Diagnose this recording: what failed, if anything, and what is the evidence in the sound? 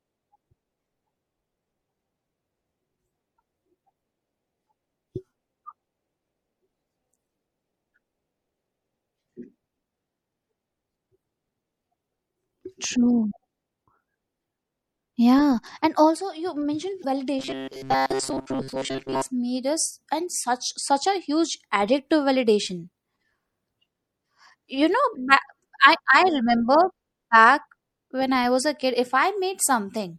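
The whole clip has the watery, swirly quality of MP3 compression, and the damage is plainly audible, with a chirpy, metallic edge on the s sounds. At this codec stage the encoder is likely starved of bits, which fits a low rate around 64 kbps. It drops weak frequency lines, which flicker in and out from frame to frame.

There are two short blips of damaged data in a compressed stream: one at 17.01 to 17.05 s and another at 19.12 to 19.16 s. Each is a brief glitch in the audio. Part of the stream is corrupted, so the decoder can't read those frames. It loses sync and skips ahead to the next frame header it can find.

From 17.39 to 19.30 s the speech turns into a rigid, metallic buzz that still roughly follows the words. This is robotic sound from repeated short buffers, and it likely comes from the driver or buffer stage. New audio arrives too slowly, so a tiny chunk gets looped to fill the gap, and most of the real audio in that stretch is skipped. 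The buzz sits at 133 Hz, which fits a repeated chunk of about 7.5 ms.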